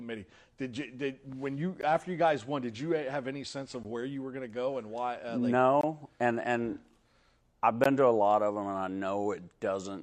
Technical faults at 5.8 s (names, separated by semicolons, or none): gap between stream segments